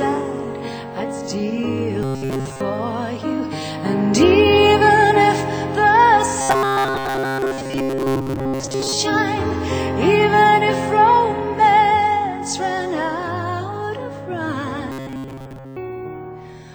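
From 2.03 to 2.61 s, again from 6.41 to 8.93 s, and from 14.92 to 15.76 s, the sound turns into a rigid, metallic buzz. This is robotic sound from repeated short buffers. New audio likely arrived too seldom, so the playback kept repeating its last short buffer. Most of the real audio in these spans is skipped. The repeats impose a fixed pitch of 134 Hz, which points to a buffer of about 7.5 ms.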